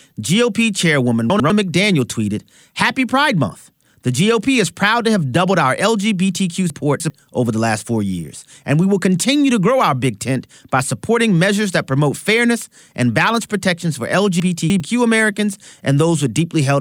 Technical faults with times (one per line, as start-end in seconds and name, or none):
1.30-1.50 chunks out of order
6.70-7.10 chunks out of order
14.40-14.80 chunks out of order